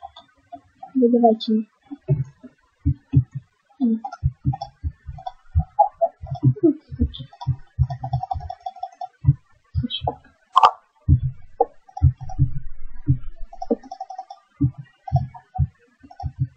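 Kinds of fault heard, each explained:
Compressed frames skipped: Near 1.56 s, whole coded frames go missing and the audio jumps ahead by about a tenth of a second.
Corrupt frame decoded: Damaged frames are played anyway, so energy lands at the wrong frequencies. A short burst at 4.12 s peaks around -25 dBFS, and a fainter one at 6.07 s sits around -35 dBFS. Each appears as an out-of-place spectrogram patch, the first lasting about one frame and the second about five frames.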